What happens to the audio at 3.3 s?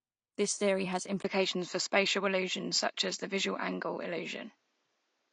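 By 3.3 s the input has switched to a poorer device. The switch happens at 1.22 s, just after "theory has", and lasts to the end, likely from a change to a narrower-band microphone. On the waveform a 20 ms gap marks the switch. After it, the spectrogram is empty above 7.6 kHz, and the sound turns duller and shifts in level by a few dB.

AAC compression also runs through the whole clip, with a plainly audible smeared, fizzy texture. At the low bitrate the encoder lowers the cut-off, leaving nothing above 9.8 kHz, which fits a low bitrate of about 32 kbps, likely the cause of the damage.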